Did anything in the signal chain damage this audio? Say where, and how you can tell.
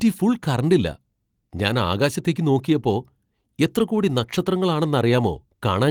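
No, nothing in the signal chain damaged this audio.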